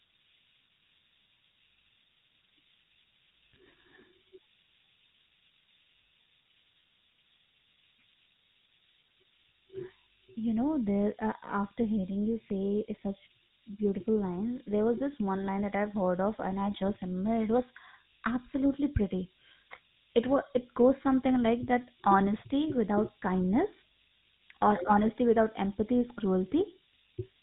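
From start to finish the speech sits under a steady hiss at nearly the same level as the voice. It is low bit depth with noise shaping. The signal is held to very few amplitude steps, which fits about 5 bits, and the rounding error is pushed up toward the top of the band. Plain coarse quantisation gives a flat, grainy noise that tracks the signal. This hiss is thin and bright, climbs steeply with frequency, and does not pause between phrases.

Also throughout, the voice has the buzzy, gravelly edge of the GSM full-rate codec, which fits a 13 kbps GSM link. The codec rebuilds speech from a vocal-tract filter driven by regularly spaced pulses and keeps only a thinned excitation, so voicing turns rasping rather than smeared. Nothing passes above 4 kHz. That separates this roughness from the hiss, which fills the top of the band. Low-bitrate modern codecs tend to sound warbly or underwater rather than coarse like this.

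From 8.98 to 9.12 s, GSM bit errors break the decoded speech into a short squawk and gargle. The burst spans several 20 ms frames. Corrupted filter, pitch and gain values bend the spectrum and briefly throw the level around. A second, shorter burst at 26.58 to 26.63 s gives a quick pop. A packet dropout would leave a gap or a repeated fragment. These errors produce wrong, distorted sound in place of the speech.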